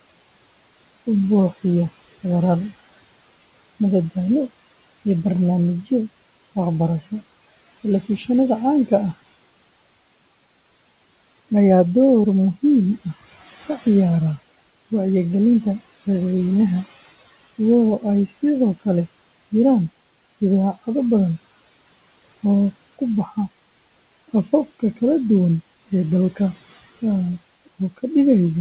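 Speech cut by the noise suppressor occurs from 18.27 to 18.36 s. The suppressor mistook a brief stretch of speech for background and pulled it down by about 10 dB for about a tenth of a second, so that moment sounds swallowed and faint.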